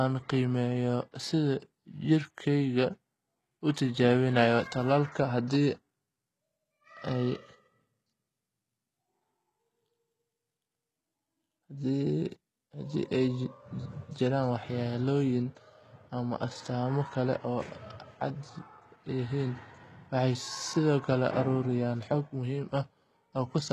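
From start to finish the speech carries a gritty, metallic treble, with s sounds going lispy and nothing at all above about 12.3 kHz. That points to HE-AAC compression at a very low bitrate, likely around 16 kbps, where the top end is rebuilt by copying lower bands upward, so its harmonics never quite line up with the real ones.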